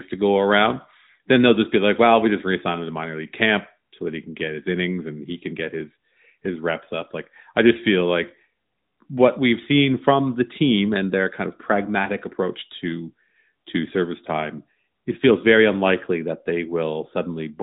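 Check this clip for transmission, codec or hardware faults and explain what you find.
No transmission, codec or hardware faults found; the speech carries the narrowband mobile path's ceiling, with nothing above 3.8 kHz, and only the light shaping expected of AMR-NB at its highest rate, which fits 12.2 kbps.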